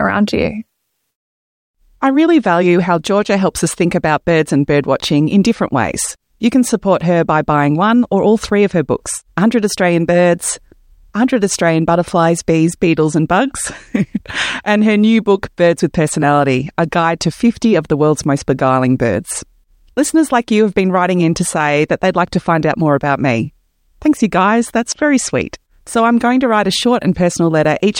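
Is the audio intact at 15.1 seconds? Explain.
Yes, at 15.1 seconds the speech plays through cleanly, with no dropout, glitch or other fault to be heard.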